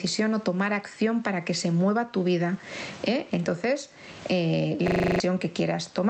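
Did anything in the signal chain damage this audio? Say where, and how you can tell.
Yes. Gain pumping runs through the whole clip at the input gain stage. The gain swings by about 20 dB, squashing loud and soft together. The likely cause is input gain set far too high, with a fast limiter clamping it.

A system hang loop occurs from 4.88 to 5.2 s, in the driver or buffer stage. One 40 ms slice repeats exactly eight times, a 25 Hz stutter, and roughly 0.3 s of audio is lost. The host froze while the hardware kept replaying its ring buffer.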